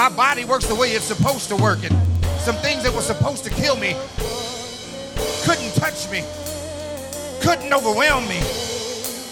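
Word clock ticks run from 0.2 to 9.27 s. An unlocked receiver clock slips about 200 ppm, dropping or repeating single samples, which produces sharp, uneven ticks about every tenth of a second.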